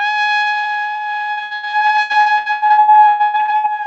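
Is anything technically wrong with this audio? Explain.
Yes. From 1.31 s to 3.81 s the clip suffers repeated packet loss, producing a robotic sound. Across that stretch audio packets kept going missing or arriving too late. Each time, the receiver covered the hole by extending the last sound it had, and another hole followed soon after. Roughly half the span is filled-in sound, with gaps coming more than two dozen times and the longest lasting about 0.11 s. The result is choppy audio with pieces missing. The call path itself shows a top end that stops near 8 kHz, which fits a low-bitrate Opus call codec.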